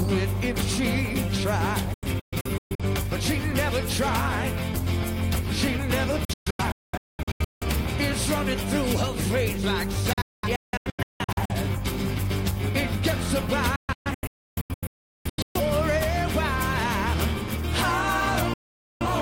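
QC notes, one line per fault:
1.94–2.84 s, digital broadcast dropout: the receiver stopped getting good frames and muted, with about 3 ms fades, leaving short holes totalling 0.43 s across 0.85 s. The longest gap is 0.13 s, and the hole lengths fit lost frames of about 43 ms each.
6.25–7.65 s, digital broadcast dropout: reception failed again and the decoder muted repeatedly, cutting 0.98 s of audio out of a 1.37 s stretch. The longest single silence is 0.21 s. The 3 ms fades make each cut abrupt, and the missing material is gone.
10.13–11.54 s, digital broadcast dropout: frames kept failing and the receiver muted in scattered holes, losing 0.90 s within 1.37 s. The longest hole lasts 0.21 s. Sound drops to silence almost instantly and resumes later in the programme, with nothing of the gaps recovered.
13.76–15.60 s, digital broadcast dropout: this is the worst loss of signal. The receiver muted for 1.41 s in total across 1.79 s, including one unbroken silence of 0.38 s. 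Each 3 ms fade makes the audio vanish and return abruptly, skipping whatever was transmitted.
18.54–19.06 s, digital broadcast dropout: a final reception failure mutes the output for about 0.47 s in total, spread across this half-second stretch, with the same 3 ms fades. The audio cuts out sharply and comes back afterwards, and what was sent meanwhile is lost.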